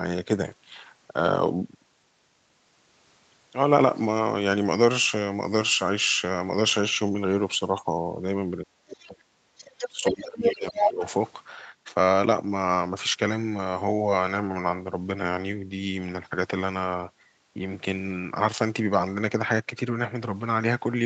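From 8.65 to 11.03 s the speech dips and breaks up, dropping by roughly 35 dB at its deepest, for about two seconds in all. This is speech suppressed in double talk, likely because the echo canceller turned down both sides when they overlapped. Within that stretch, the other side's voice leaks through: faintly at 8.9 s, nearly as loud as the speech at 9.57 to 9.89 s and 10.05 to 10.23 s, and louder than it at 10.43 to 10.91 s. This is likely loudspeaker echo that the canceller failed to remove.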